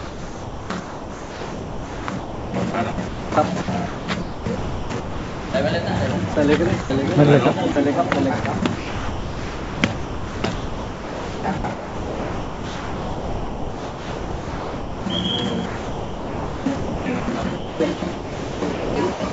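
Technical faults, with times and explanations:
0.0–5.54 s, 6.34–6.90 s, 7.72–15.06 s and 15.66–19.33 s, sound chopped by the voice detector: within these stretches about 4.06 s, 0.1 s, 5.98 s and 2.53 s of sound drop out and are replaced by smooth synthetic hiss, likely because the sender's voice detector kept toggling transmission off and on. Unlike packet-loss concealment, the gaps are filled with steady noise rather than repeated or stretched sound. The sound carries nothing above 8 kHz, which fits a wideband call codec.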